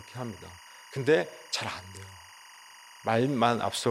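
Timecode bleed runs through the whole speech clip. A thin, chirping warble sits behind the speech from start to end. It is a square-wave code flipping between tones near 1 and 2 kHz. Its rhythm repeats 24 times a second, which fits 24-frame timecode. Linear timecode from a nearby track or cable has leaked into the audio path. It sits around 25 dB below the speech, so it is quiet but constant.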